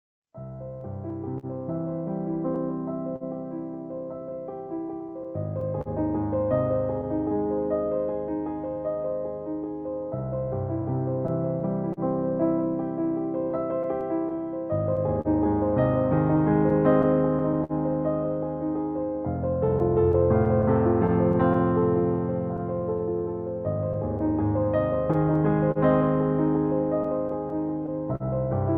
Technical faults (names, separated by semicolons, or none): clock drift between sender and receiver; repeated timing corrections; scattered short gaps